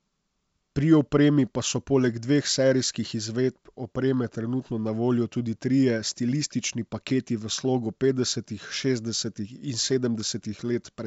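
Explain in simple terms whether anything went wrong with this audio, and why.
Nothing went wrong with this audio: it is speech sent over G.722 wideband telephone coding, which is why nothing is heard above about 7.7 kHz, and that cut-off is simply how this kind of phone connection works rather than a fault.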